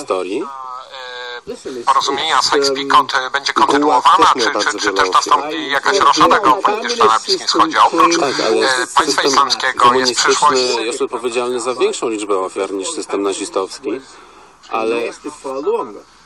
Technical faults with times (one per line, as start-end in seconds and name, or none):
0.00-16.26 resampler restarted on every block